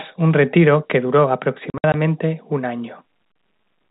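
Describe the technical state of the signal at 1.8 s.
Packet loss filled with silence runs from 1.70 to 1.94 s, after "un retiro que duro": about 120 ms of audio drops to silence in gaps of up to 60 ms, with hard edges.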